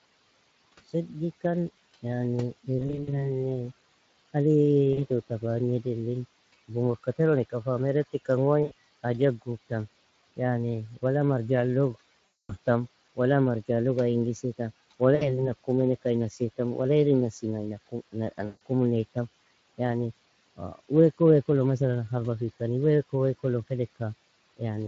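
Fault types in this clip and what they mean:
Speex codec: Speex is an older CELP speech codec used in VoIP and game chat. It has colored this whole clip. The damage is plainly audible. Speech sounds hoarse and grainy, with a noisy edge. This fits a middle setting of around 20 kbps.
VoIP packet loss concealed by the speech codec: Packets went missing. The decoder filled each gap by stretching its last pitch and filter at falling loudness. Six such spots turn speech into a fading buzzy tone or coloured noise. The longest, about 240 ms near 12.3 s, comes before "wala marjalog ay ingis".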